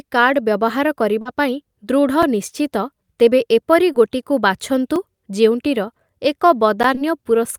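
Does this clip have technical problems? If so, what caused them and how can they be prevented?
Yes. Short concealed packet loss occurs at 1.21 to 1.27 s, 3.92 to 3.96 s and 6.95 to 6.99 s. About 40 ms of the call went missing in the first instance and 20 ms in each of the other two, arriving too late for the decoder. The receiver covered each hole by extending the preceding sound and then blending back into the real signal, which leaves a brief smear or wobble where the genuine audio should be. This can be prevented by giving the receiver a larger jitter buffer and using forward error correction on an unreliable network.

A block of digital silence occurs at 2.23 s, 4.96 s and 6.83 s, lasting about 5 ms, 2 ms and 10 ms. Each time, the output was replaced by zeros, most likely because the audio program failed to fill its playback buffer in time. The signal drops straight to nothing and back without any fade, so all three gaps, being under about 15 ms, are heard as ticks or dips rather than as silence. 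This can be prevented by using a larger output buffer and giving the audio thread higher scheduling priority.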